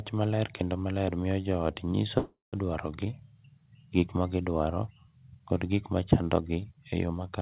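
At 2.18 s, just after "miyo jo ot nyiso", a call audio freeze stretches the last sound into a fading buzz and then about 0.17 s of silence, until 2.56 s. The likely cause is delayed packets draining the jitter buffer. Unlike packet loss, nothing is cut: the speech resumes where it stopped, about 0.35 s late.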